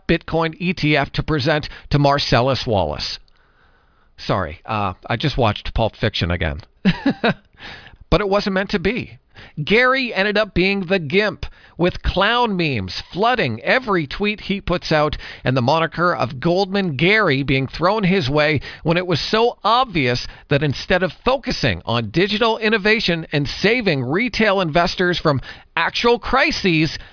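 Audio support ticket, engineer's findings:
No faults found in playback.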